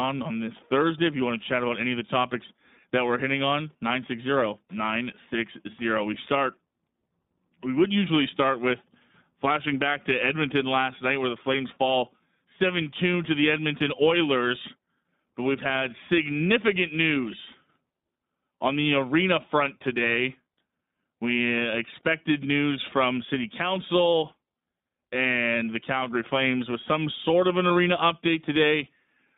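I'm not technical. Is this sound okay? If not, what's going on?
No, not quite. The whole clip has gone through the iLBC codec, a phone-call speech compressor. It cuts away everything above about 3.7 kHz, so the voice sounds thin and boxy, and the compression leaves it noticeably rough and a bit synthetic throughout.

There's also a single lost iLBC frame at about 27.68 s, right after "some sort of an". For about 20 ms the decoder filled the gap by repeating the last bit of voice with some noise, so you get a tiny buzzy smear before the voice snaps straight back.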